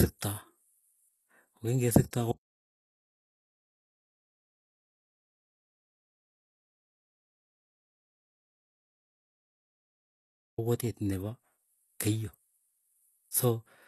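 HE-AAC compression runs from start to finish. The sound is likely coded with HE-AAC at a low bitrate, which fits roughly 16 kbps. Only the lower spectrum is coded directly. The treble is rebuilt by copying lower bands upward and shaping them with a coarse envelope, so the top end sounds synthetic and stops dead at 12.4 kHz. The damage is plainly audible: sibilants in the speech come out gritty and lisped, with a metallic edge where the regenerated harmonics fail to line up.

An audio dropout to silence begins at 2.32 s and lasts until 10.58 s, removing about 8.26 s of the recording. The input was lost, likely through a disconnected device, a failed link or a mute, while writing continued with silence. The speech cuts off abruptly and resumes just as suddenly. The gap holds silence with no room tone, and whatever was spoken in between is gone.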